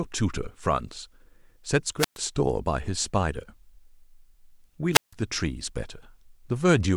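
Twice in this short speech recording the radio link of an analogue FM wireless microphone weakens far enough that the receiver's squelch shuts the output, a wireless microphone squelch dropout. Each time, hiss swells briefly as the signal fades, then the audio falls into near silence before the voice comes back: from 1.98 to 2.18 s, with a mute of about 118 ms, and from 4.93 to 5.14 s, where the hole lasts about 157 ms.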